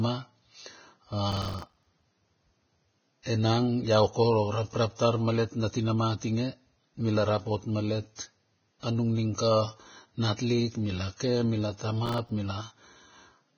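The speech carries heavy damage from likely Vorbis compression at a very low bitrate, consistent with roughly 17 kbps: nothing survives above 6.6 kHz, and the coarsely quantised upper band turns fine detail into hiss-like grain, roughening tones and blurring consonant attacks throughout. Processor overload crackle occurs from 1.32 to 2.02 s and again from 12.06 to 12.29 s. The processor repeatedly missed its deadlines for buffers only a few milliseconds long, dozens in the first stretch and about ten in the second, each leaving a hard-edged silent gap, heard together as gritty tearing over the speech.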